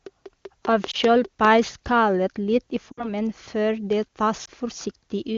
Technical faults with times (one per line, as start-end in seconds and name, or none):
0.06-1.46 train of clicks
0.91-0.96 lost AMR speech frames
2.92-3.12 lost AMR speech frames
4.45-4.49 lost AMR speech frames